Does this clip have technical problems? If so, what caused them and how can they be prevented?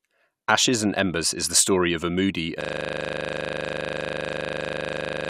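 Yes. A system hang loop starts at 2.61 s, right after "story of a moody", and lasts to the end: a 40 ms slice repeats about 67 times, giving a rough 25 Hz buzz because the driver froze while the hardware replayed its ring buffer. Keeping audio threads real-time and adding a watchdog that mutes stalled output would prevent it.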